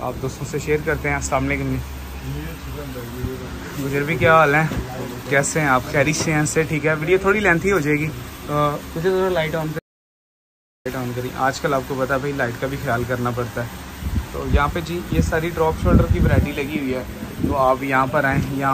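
The audio cuts out completely from 9.79 s to 10.85 s, so you lose just over a second, about 1.06 s, of whatever was happening there. It's an audio dropout to silence: the gap is silent with no room tone at all, and the sound stops and restarts mid-flow rather than fading. That points to the input going away for a moment, likely a disconnected device, a broken link or a stray mute, while recording carried on writing silence.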